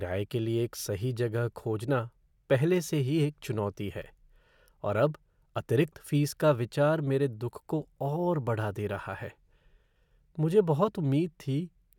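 No technical faults are audible anywhere in the speech recording.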